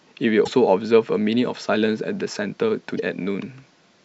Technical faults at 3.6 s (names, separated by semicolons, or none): none